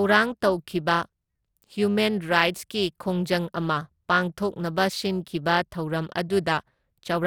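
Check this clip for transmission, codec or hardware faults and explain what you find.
There is one fault, periodic clock jitter, and it runs through the whole clip. Interference is modulating the converter's sampling clock at a single rate, around 300 Hz, so each sample is taken slightly early or late in a repeating pattern. That timing wobble puts sidebands roughly 300 Hz above and below every component of the speech, strongest on the higher frequencies. The result is a rough, metallic edge on the voice that disappears in the pauses.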